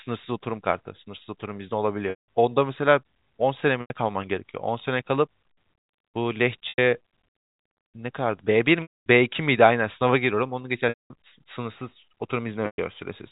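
Packet loss with pitch repetition interrupts the speech at 2.10, 3.81, 6.69, 8.82, 10.89 and 12.66 s. The receiver repeats the last pitch period to cover gaps of 90 to 240 ms, producing a brief buzzy hold that fades before the narrowband telephone audio resumes.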